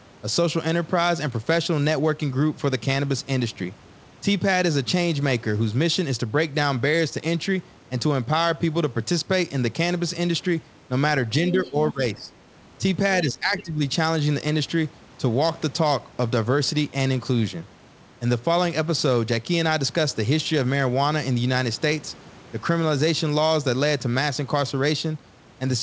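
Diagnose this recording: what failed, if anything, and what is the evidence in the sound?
Call processing, speech suppressed in double talk: at 11.52–12.33 s and 13.23–13.83 s the speech dips by about 10 dB, likely the echo canceller ducking both talkers. The waveform shows shrunken envelopes and the spectrogram shows faded bands.

Call processing, other side's voice leaking through: faint scraps at 11.64–11.71 s, about 30 dB below the speech, and at 13.58–13.63 s, about 20 dB below, likely residual loudspeaker echo. They show as spectrogram traces below the G.722 8 kHz ceiling.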